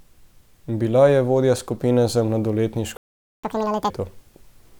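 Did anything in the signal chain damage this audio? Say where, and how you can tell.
Yes. A playback stall at 2.97 to 3.44 s silences the speech for about 0.46 s, a flat waveform gap, likely from a starved playback buffer.

Catch-up at higher speed from 3.44 to 3.90 s: the player resamples its backlog at 2x, so harmonics jump nearly an octave higher and spectrogram features appear time-squeezed.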